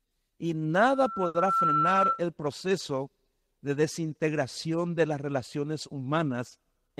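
Loudspeaker feedback squeal runs from 0.74 to 2.25 s in this speech clip. A microphone was picking up the loudspeaker it fed, and at 1.3 kHz the loop gain rose above one, so that single frequency fed on itself. The tone swells over roughly three-quarters of a second to about 5 dB above the speech, then drops out just before "proceso de desintegración de". A short stall from a late packet occurs from 1.27 to 1.36 s, inside the squeal. A packet arrived after its playout time, the jitter buffer ran dry, and the receiver held the last sound for 70 ms until it came. Playback then resumed where it left off, so nothing is lost, but everything afterwards runs 70 ms later.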